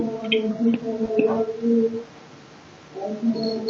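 At 1.05 to 1.09 s there is a short concealed packet loss. About 20 ms of audio arrived too late to decode. The receiver stretched the preceding sound to cover the gap, then faded back. It heard as a brief smear or wobble. Above it, the Opus call path trims everything beyond 8 kHz.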